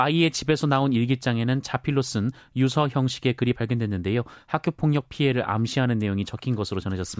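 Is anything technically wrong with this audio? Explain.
No technical faults are present.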